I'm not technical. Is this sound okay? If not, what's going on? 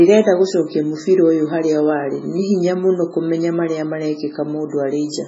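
No. MP3 compression damage runs through the whole clip: nothing above about 7.7 kHz, so the speech sounds dull, with a watery, swirly quality. The likely cause is heavy MP3 encoding that cut the treble and dropped quiet detail that flickers in and out.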